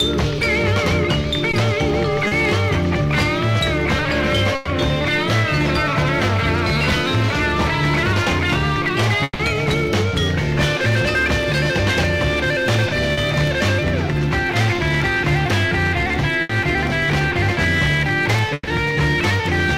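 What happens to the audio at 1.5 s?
A short stretch of packets failed to reach the decoder in time between 1.51 and 1.55 s, causing short concealed packet loss. About 20 ms of audio was missing, and the receiver covered the gap by extending the preceding sound for roughly 20 ms, following its pitch or shaping noise, before blending back into the real signal. The result is a brief smear or wobble where the original detail briefly disappears.

Hard clipping is also present at this point, as it is across the whole clip. The signal drives a stage about 10 dB beyond what it can pass, so around 7 percent of samples have their peaks sliced flat. Those flattened tops add high harmonics, giving the louder moments around 1.5 s a harsh, fuzzy crackle rather than clean peaks.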